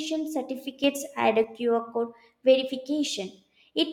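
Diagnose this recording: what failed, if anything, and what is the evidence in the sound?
A sudden gain jump hits the speech from 0.84 to 1.44 s: voice and background noise rise together by about 5 dB in a single step, then drop back just as abruptly. The likely cause is a digital gain setting applied without a ramp, in the processing stage.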